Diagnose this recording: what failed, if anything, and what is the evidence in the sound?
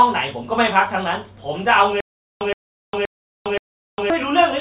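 A stutter with silent gaps sits at the playback or stream buffer stage. From 2.01 to 4.10 s, a 119 ms burst repeats four times every 524 ms, with 405 ms of digital silence between. The stream likely stalled, replaying its last fragment each retry. Intervening speech is lost.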